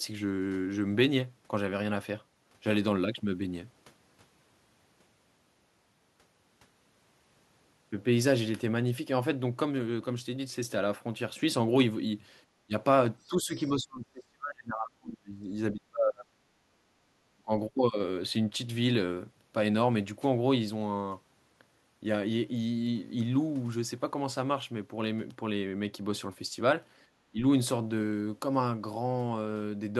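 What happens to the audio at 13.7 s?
At 13.7 s the talker is in the middle of a stretch of speech suppressed in double talk, running from 13.27 to 15.51 s. The level sinks sharply, to about 35 dB down at its deepest, and roughly 2 s of it is affected. This is likely an echo canceller that, with both ends talking at once, couldn't tell the near talker from loudspeaker echo and attenuated everything.

Just before that point, from 13.65 to 13.7 s, there is a brief burst of the other side's voice leaking through. It is a faint, short fragment, about 30 dB below the speech. The likely cause is echo the canceller failed to fully subtract: the far end's audio, played on the talker's loudspeaker and picked up again by the microphone, slips past as a scrap during the suppressed interval.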